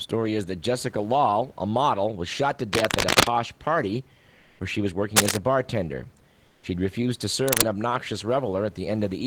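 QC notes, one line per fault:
2.73–3.29 s, 5.16–5.37 s and 7.48–7.66 s, cable scratch noise: dense, uneven crackling bursts rise above the speech, roughly louder than the voice itself. The first falls between "model was shot to" and "party where she was", the second between "party where she was" and "a bartender". The likely cause is a worn cable or connector whose contact resistance flickers as it moves. Unlike clicks or dropouts, each burst lasts a fraction of a second as scratchy rustle and leaves no gap in the speech.
4.39–4.57 s and 6.49–6.61 s, comfort noise in place of the background: for 180 ms, then 120 ms just after "a bartender", the real room noise, sitting about 37 to 38 dB below the loud speech, gives way to a smooth, featureless hiss. The level matches at first and is about 4 dB lower the second time. This is likely discontinuous transmission, which points to Opus DTX, with synthetic noise filling the pause. 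Unlike a true silence or a gate, the pause never goes quiet, and the texture of the background changes.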